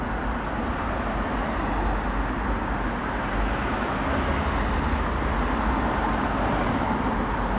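Nothing goes wrong anywhere in this one; the sound just comes across the way a G.711 mu-law call carries it, with nothing above about 4 kHz.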